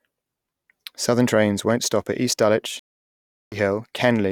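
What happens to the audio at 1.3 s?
Nothing goes wrong at 1.3 s; the speech there plays through intact, with no dropout, click, distortion or other fault.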